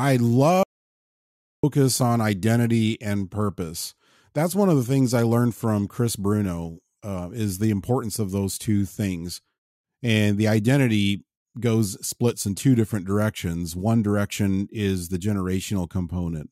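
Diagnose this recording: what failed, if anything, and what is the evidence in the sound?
Audio dropout to silence, 0.63 to 1.63 s: speech drops to silence until "on identity and purpose", likely a lost input link while silence kept recording.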